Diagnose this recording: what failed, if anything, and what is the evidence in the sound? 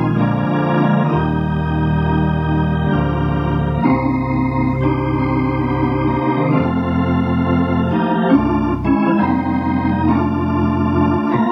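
Nothing failed in this recording, and the sound gives no evidence of any fault.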